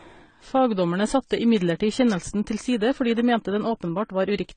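Across the whole speech clip, nothing is present above 9 kHz, and two kinds of coding damage are heard together: a smeared, swirly upper band and a coarser grain. That layering most likely comes from transcoding between lossy codecs, with a low-rate HE-AAC encode re-encoded as AAC-LC at a modest rate. A single encode would show one artefact character; here the second codec spent its bits re-coding the first one's errors.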